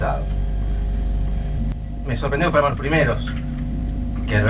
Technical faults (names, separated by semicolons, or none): skip ahead; jitter buffer speed-up